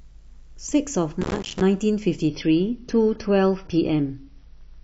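From 1.21 to 1.61 s the speech breaks into processor overload crackle. The processor repeatedly failed to deliver its audio buffers on time, and each miss left a tiny hole of silence. The spacing of the holes fits a buffer of around 4 ms, and dozens were missed in a row, so they fuse into a gritty tearing over the voice. The waveform shows a dense run of short drops to silence with hard edges. The spectrogram shows a comb of thin broadband vertical streaks across that stretch.

At 2.28 s, and through to the end, the sound switches abruptly to an adaptive stream at a lower bitrate, with no gap at the join. The dullness and the added artefacts point to AAC at roughly 24 kbit/s in place of about 96 kbit/s, as happens when a slowing connection forces a cheaper version of the stream. Nothing above 6.6 kHz survives, so sibilants lose their edge and the voice turns muffled. The spectrogram shows a hard flat ceiling at 6.6 kHz from that instant on, with patchy, smeared energy beneath it.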